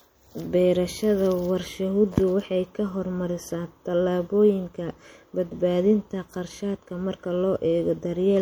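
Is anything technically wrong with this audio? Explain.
Yes. Throughout the speech there is plainly audible damage that points to MP3 compression, likely at a low bitrate that fits about 64 kbps. The encoder divides the sound into many narrow frequency lines and spends its few bits only where its hearing model says they count. Weak lines get dropped and return from frame to frame. That gives the speech a watery, swirling texture. S sounds turn harsh and chirpy, and attacks blur.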